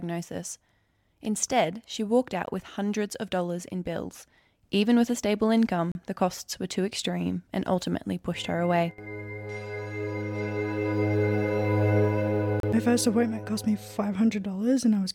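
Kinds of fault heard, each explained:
Bluetooth stall: the audio drops to brief silence three times, at 2.46 s for 16 ms, from 5.92 to 5.95 s, and from 12.60 to 12.63 s, then carries on. The likely cause is the headphone buffer running dry while delayed wireless packets were resent.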